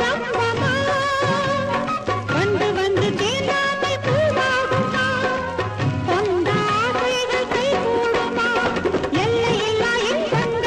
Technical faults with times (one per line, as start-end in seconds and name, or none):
none